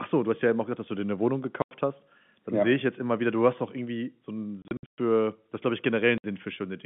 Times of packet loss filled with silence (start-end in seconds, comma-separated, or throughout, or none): 1.62-1.71, 4.62-4.98, 6.18-6.24